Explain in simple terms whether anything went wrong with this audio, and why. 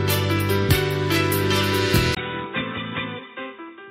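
At 2.15 s the sound briefly drops out for about 20 ms, then comes back duller, boxier and noticeably quieter, with nothing above about 3.8 kHz and a faint new background noise. It stays that way to the end. This is most likely an input switched to a poorer device. A simple tone change or filter wouldn't alter loudness and background noise too, or arrive after a tiny gap. Here everything shifts at once.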